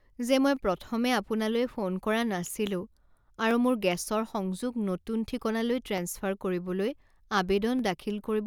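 Dropped samples at 0.57 s (before "প্ৰথমে আপোনালৈ ফোন কৰা"), 2.43 s (after it), 3.51 s (before "মোৰ গেছৰ"), 5.98 s and 7.79 s each give a single sharp click in the speech. Each is likely a loss of a fraction of a millisecond that makes the waveform jump abruptly.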